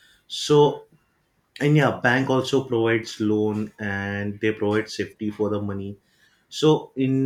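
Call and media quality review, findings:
No faults found in the speech clip. Nothing audible to attribute to any component in the signal path.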